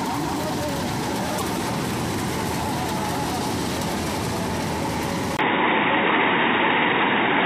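Damaged data in a compressed stream shows up from 1.35 to 1.43 s. For those 80 milliseconds the decoder was handed bytes that did not parse as valid frames. It produced garbage and lost its place, then had to hunt for the next frame header before normal decoding resumed. The result is a brief disturbance that breaks into the audio.

At 5.37 s the audio changes character, and the change most likely comes from the input switching to a poorer device. A gap of about 20 ms marks the cut. From there to the end, nothing above 3.8 kHz comes through, so the sound is suddenly dull and boxy. The level shifts by roughly 5 dB. A new background noise appears, sitting around 45 dB below the signal, belonging to the narrower-band device now feeding the recording.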